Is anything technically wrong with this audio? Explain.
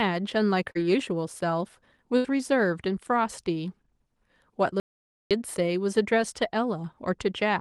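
Yes. There are three faults in this speech clip.

From 0.71 to 0.77 s there is short concealed packet loss. About 40 ms of the audio never reached the decoder in time. The receiver covered roughly 36 ms of that gap by extending the preceding sound, then faded back into the real signal. You hear a brief smear or small wobble. Any short consonant in that spot can disappear.

From 2.17 to 2.26 s there is a burst of packet loss. About 80 ms went missing in a row. This time the concealment had to run longer, around 72 ms. It stretched the last sound and let it decay. The result is a short held buzz or fading hiss. Then the speech jumps ahead, and the material in between is simply absent.

From 4.80 to 5.31 s there is an audio dropout to silence lasting about half a second. The sound cuts to silence, with no room tone at all, and then resumes. Whatever occurred in that half second is lost. The most likely cause is the input briefly failing or being muted while the recorder kept writing silence.

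All of this rides on an Opus call path, and the top end stops near 12 kHz.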